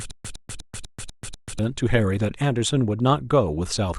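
Stutter with silent gaps runs from the very start to 1.59 s: a 109 ms fragment of speech repeats six times, each followed by about 137 ms of digital silence, one every 247 ms. The likely cause is a stalled stream replaying its last buffer, so the speech meant for that stretch is lost.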